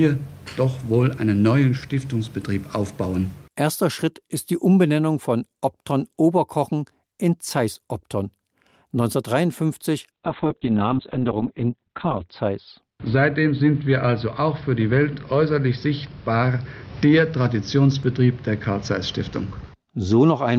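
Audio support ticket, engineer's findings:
Call bitrate drop, 10.13 s to end. Sound turns muffled and rough, with a watery texture. Probable component: bandwidth estimator and encoder. Estimate collapsed, encoder pushed from 48 kbps down to 6 kbps, bottoming out for 2.1 s. At that rate Opus quantises coarsely and narrows audio bandwidth from 20 kHz to 4 kHz, stripping highs. No recovery before clip ends.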